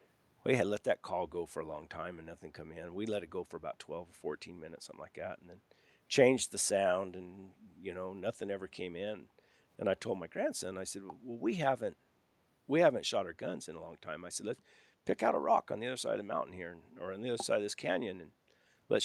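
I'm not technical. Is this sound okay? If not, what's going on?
No, not quite. Right at the very start, from 0 to about 0.06 s, there's a tiny echo leak: a very faint, delayed copy of the speech, trailing the original by about 370 ms. It's so quiet and brief you'd easily miss it. The likely cause is that the other person was on a loudspeaker, and their phone's echo cancelling didn't fully scrub out what its microphone picked up, so a scrap bounced back to you.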